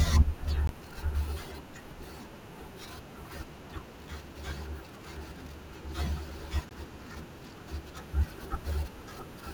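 Brief hard-edged dropouts of about 18 ms cut the speech at 0.67 s and 6.69 s: gaps between stream segments, where six-second segments' timestamps leave holes that are filled with silence.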